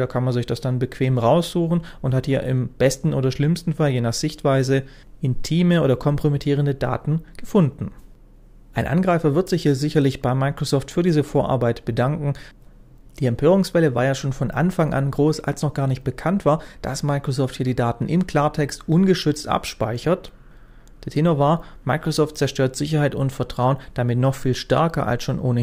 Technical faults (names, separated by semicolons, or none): dropped samples